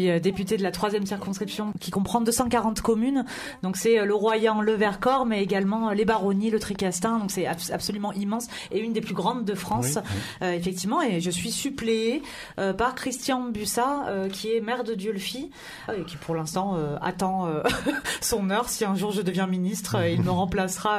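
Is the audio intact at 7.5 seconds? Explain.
Yes, the audio is intact at 7.5 seconds, with no dropout, glitch or other fault at that point.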